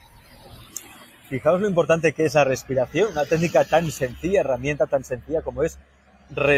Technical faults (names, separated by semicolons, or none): noise suppressor applied to music or sounds; sound cut by the noise suppressor